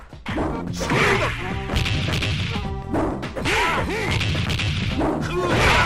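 No technical faults can be heard anywhere in this recording.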